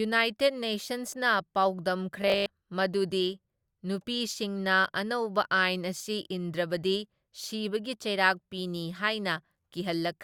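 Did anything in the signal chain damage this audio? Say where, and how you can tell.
Yes: robotic sound from repeated short buffers, 2.22 to 2.52 s, at the driver or buffer stage. The speech collapses into a rigid metallic buzz at 50 Hz, which fits a 20 ms block being replayed, likely from audio arriving too late, with about half the material repeated.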